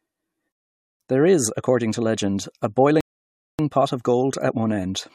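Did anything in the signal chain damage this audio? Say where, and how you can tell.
Yes. The speech drops into dead silence from 0.52 to 1.00 s, and again from 3.01 to 3.59 s between "according to legend a" and "pot of", then picks up exactly where it stopped. These are rebuffering stalls at playback: the player's buffer ran dry, adding 480 ms and 583 ms without losing any audio.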